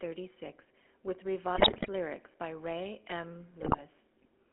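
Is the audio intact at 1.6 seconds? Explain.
No. From 1.56 to 1.89 s the link is delivering corrupted data to the decoder: GSM bit errors have flipped bits in the coded frames, so the filter, pitch and gain values it reconstructs are wrong. That third of a second fits a run of about sixteen 20 ms frames. The speech collapses into squawking, popping and gargling, with the spectrum bent out of shape and the level jumping unpredictably from frame to frame.

Underneath that burst, the whole clip passes through the GSM full-rate codec. The sound points to a 13 kbit/s stream. The codec models the vocal tract and excites it with a sparse, regularly spaced pulse train, discarding most of the fine excitation detail. The audio is confined to roughly 300 Hz to 3.4 kHz and carries a plainly audible buzzy, gravelly roughness, so even the frames around 1.6 s sound coarse.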